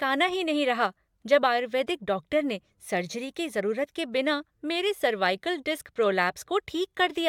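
Speech, with no technical fault to be heard anywhere in the recording. There is nothing to mark at any time, and so no cause to explain.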